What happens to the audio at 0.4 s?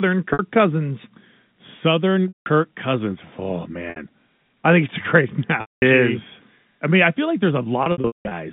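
Right around there you're hearing the tail end of a packet loss with pitch repetition, running from about 0.33 to 0.39 s. Roughly 60 ms of audio went missing, which fits two lost packets. The receiver covered the hole by looping the last pitch period and fading it down, so the sound briefly hangs on a slightly buzzy, held tone that thins out before the speech cross-fades back in just under 0.4 s.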